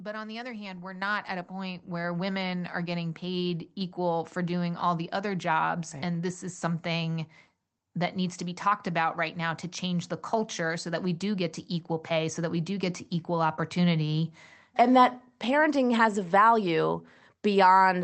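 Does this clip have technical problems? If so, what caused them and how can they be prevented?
Yes. The microphone volume stepped up twice, at 1.02 s and 3.81 s. The first jump is about 7 dB and the second about 2 dB. Speech and background noise get louder together at each point, and the level stays there. The call software judged the input too quiet and raised the device's input volume in one step. The sound, which ends near 8 kHz, carries these steps through. To prevent this, turn off automatic microphone gain adjustment and set the input level by hand.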